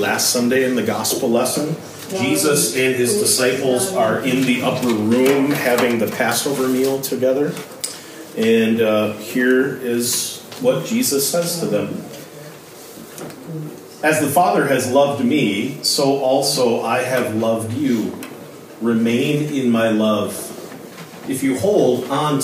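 No technical faults can be heard anywhere in this audio.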